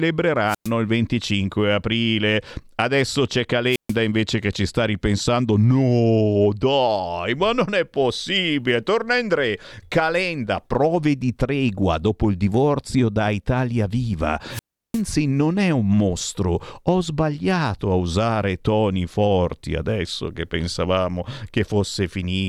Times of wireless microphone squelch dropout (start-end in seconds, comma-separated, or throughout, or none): 0.46-0.71, 3.68-3.96, 14.50-15.02